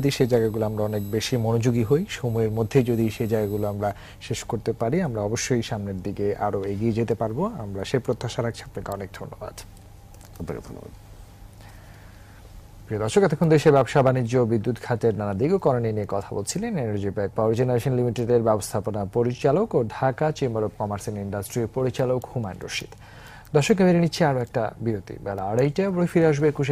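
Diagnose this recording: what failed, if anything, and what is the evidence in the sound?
Sample-format conversion, 0 to 3.91 s: crude rate conversion by dropping samples, fitting 48 kHz to 44.1 kHz. Its inharmonic fizz tracks loud highs, unlike warbling codec artefacts.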